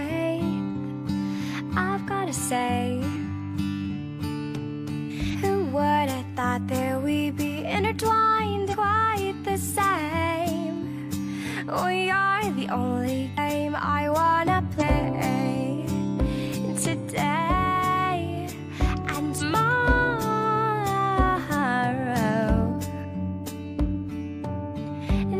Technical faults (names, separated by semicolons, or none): compressed frames skipped